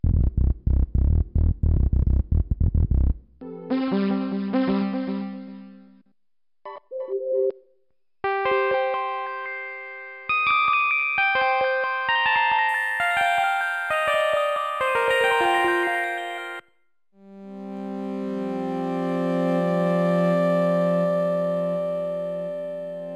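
From 12.69 s to the end, imaging from linear upsampling appears: straight-line interpolation, which fits a rate raised from 11 kHz to 48 kHz, dulls the top and leaves a faint mirrored band at roughly 5.5 to 11 kHz, around 30 dB down. This gives a light metallic shimmer, unlike plain low-pass dullness.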